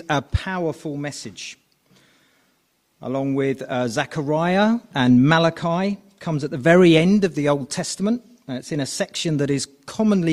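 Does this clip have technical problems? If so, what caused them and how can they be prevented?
No, nothing here calls for a fix, so there's no cause to track down and nothing to prevent.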